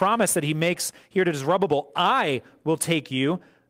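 No technical faults can be heard anywhere in the recording, and the signal holds steady throughout.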